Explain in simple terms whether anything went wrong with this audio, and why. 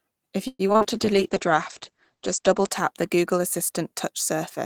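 Two things went wrong. From 0.47 to 0.86 s there was repeated packet loss (robotic sound): chunks of audio kept going missing, and each hole was patched by stretching the last bit of speech, so about half that stretch sounds choppy.

Right after, from 0.88 to 3.96 s, there was a call bitrate drop: the connection squeezed the speech into far less data, so it was coded more crudely and lost everything above about 8 kHz, making the voice sound muffled, rough and watery.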